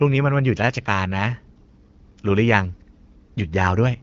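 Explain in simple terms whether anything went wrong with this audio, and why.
Nothing went wrong here: the speech has just been through the ordinary HD Voice compression that phone calls use, and there's no problem anywhere in it worth pointing out.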